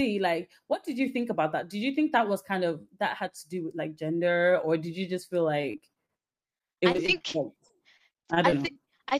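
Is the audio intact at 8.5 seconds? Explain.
No. At 8.5 seconds the speech is choppy, with small pieces dropping out. This is repeated packet loss (robotic sound), running from 5.61 s, just after "did you just feel", to 9.13 s. Over that stretch 31 short gaps occur, the longest 38 ms. Each gap is patched by stretching the preceding sound, so about 17% of the span is concealed audio rather than real signal. That gives it its stuttering character.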